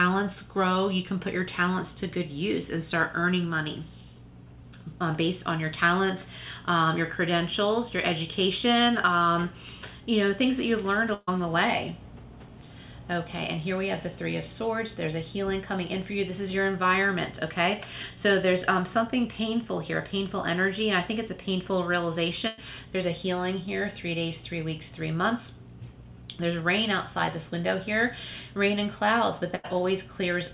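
At 11.14 s there's a burst of packet loss: about 140 ms of audio never arrives, and the receiver papers over it by stretching the last bit of sound for roughly 130 ms while fading it, then a brief 10 ms dropout before things pick up further along. The same thing happens at 22.47 s (about 100 ms lost) and 29.55 s (about 80 ms lost), each heard as a short held, fading smear. Everything sits under 4 kHz, which fits a narrowband G.711 call path.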